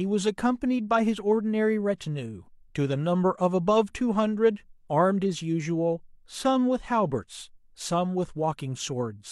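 Nothing here trips any alarms: the speech runs along with no dropouts, glitches or other technical faults to point to.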